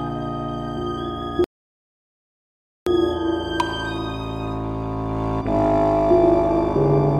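At 1.44 s the music halts into silence until 2.87 s, a rebuffering stall: the player starved of downloaded data, paused, then resumed exactly where it stopped, adding 1.42 s.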